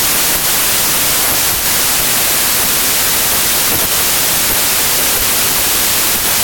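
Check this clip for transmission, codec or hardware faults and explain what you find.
One fault runs through the whole clip: a wrong sample width. The speech was written as 32-bit integers but read back as packed 24-bit integers. Each 4-byte value is split across the wrong boundaries, so many read samples mix bytes from two real samples. Only some keep the true top bits. The result is loud, harsh noise with the speech buried underneath. Because every 32-bit sample now yields more than one read sample, playback runs at 0.75 times speed, and the pitch drops by the same ratio.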